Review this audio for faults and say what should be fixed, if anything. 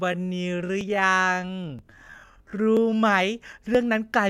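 A time-stretch, likely applied to fit the opening to a set length, slowed the first 3.0 s to 0.6 times normal speed while holding pitch. This time-stretched section drags, then the pace jumps abruptly to normal. To prevent it, fix timing at the edit rather than stretching, or cap the stretch ratio.

Audio missing between chunks, likely from a recorder dropping a short slice around 20 ms at each 1 s buffer boundary, produces brief skips at 0.81, 1.79, 2.77 and 3.75 s, with the two sides butted together. To prevent it, use overlapping or double-buffered capture so no samples are lost between chunks.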